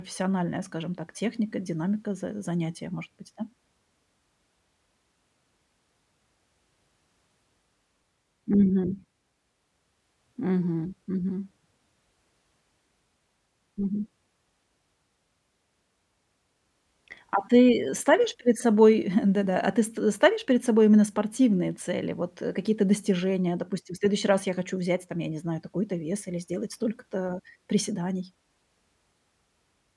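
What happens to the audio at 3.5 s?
At 3.5 s the speech carries on cleanly, with no dropout, click, distortion or other fault at that moment.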